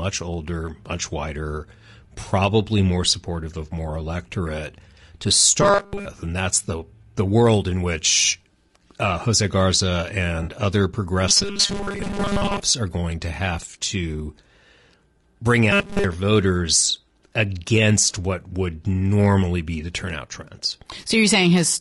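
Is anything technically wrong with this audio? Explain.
Yes, there are three kinds of problem here.

Across the whole speech clip there's plainly audible codec damage, most likely from low-delay AAC compression (AAC-ELD) at around 32 kbps. This codec works in very short frames so calls stay responsive, but short frames can't separate the pitch harmonics cleanly and they eat up bits. At that rate you hear it: the voice is rough and grainy, with hiss filling the gaps between harmonics and a top end that sounds synthetic.

Then there's robotic sound from repeated short buffers, three times: 5.62 to 6.05 s (after "of more electorate to", before "and that's the the"), 11.29 to 12.63 s (before "are going to have"), and 15.71 to 16.04 s (before "voters against what would"). The cause is probably audio arriving too seldom, so playback loops the last few milliseconds instead. The buzz sits at 200 Hz, which fits a 5 ms chunk being repeated. 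In the first two stretches most of the sound is repeats. The last one is entirely repeats, so it turns into a rigid metallic drone that only loosely tracks the speech.

Finally there's AAC frame loss with concealment at 10.43 s, lasting 40 ms. That length points to a couple of lost frames. The decoder patches the gap from the last good spectrum, so the dropout doesn't go silent. Instead you get a brief smeared, noisy blip where the real signal should be.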